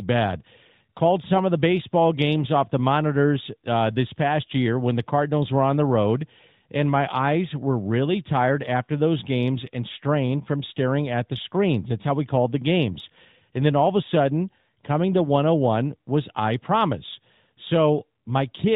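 No technical faults can be heard in this speech. It comes through an AMR narrowband mobile codec path that is working as intended: nothing reaches above 4 kHz, and the light coding damage fits the codec's highest-rate mode, around 12.2 kbps.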